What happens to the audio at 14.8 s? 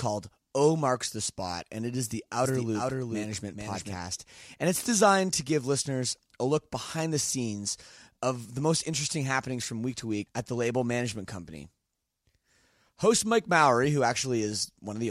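Nothing goes wrong at 14.8 s; the audio is intact at that moment.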